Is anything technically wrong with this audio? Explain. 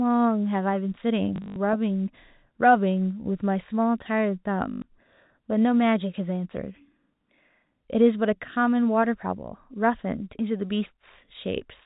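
Yes. From 1.36 to 1.56 s, packet loss with the last packet repeated: about 140 ms is missing, scattered, with the longest gap 80 ms. Repeated packets give a robotic stutter. At 4.72 to 4.82 s, a 100 ms gap does the same. Both buzz at the packet rate, which fits 20 ms packets. The G.711 telephone coding limits the sound to below 4 kHz.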